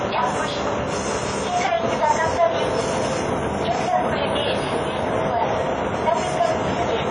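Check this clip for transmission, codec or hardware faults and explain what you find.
One codec fault runs through the whole clip: the sound carries the marks of likely WMA compression from start to finish. Nothing is present above 10 kHz. A transform coder working at a low bitrate, consistent with roughly 32 kbps, discards high bands and zeroes weaker spectral lines. Its long blocks smear quantisation noise over tens of milliseconds. The damage is plainly audible as a ringing, washy texture and a hiss that swells and recedes with the signal.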